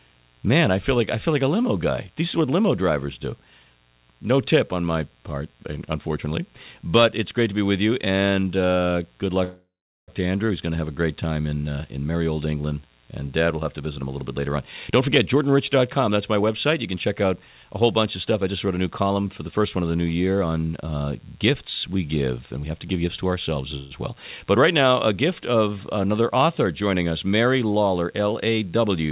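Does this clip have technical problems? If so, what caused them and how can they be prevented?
Yes. There's a steady mains buzz under the whole clip, a raspy 60 Hz hum with harmonics climbing well up, sitting at about 35 dB below the signal. Sharp switching spikes from a dimmer, rectifier or poorly shielded cable are leaking into the chain. Keep dimmers off the circuit and use shielded, balanced cabling.

There are two call audio freezes. From 9.44 to 10.10 s the last sound hangs and fades, then goes quiet for about 0.4 s before resuming. A shorter one, around 0.13 s, runs from 23.77 to 23.92 s. Nothing is lost; the sound just picks up late. The likely cause is packets stalling in transit so the jitter buffer ran dry. A steadier network path and traffic prioritisation would help.

Then there are jitter buffer speed-ups, where the receiver trims pitch-period slices to shed built-up delay. 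This happens from 13.73 to 15.52 s at 112% speed, from 15.97 to 19.77 s at 107%, and from 22.57 to 23.59 s at 111%. Pitch stays put but things sound hurried. Smoother delivery avoids the bursts that cause this.

The narrow, band-limited top end, with nothing above 4 kHz, is just the call codec doing its usual job.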